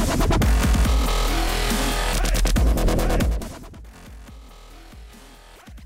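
Zipper noise runs from 3.20 to 3.72 s, while the level drops by roughly 25 dB. The gain falls in 2 dB steps, about twenty a second, with no smoothing between them. Each step is an abrupt jump in amplitude, so the sound carries a fast train of small clicks that reads as a gritty ticking or zipping over the fade.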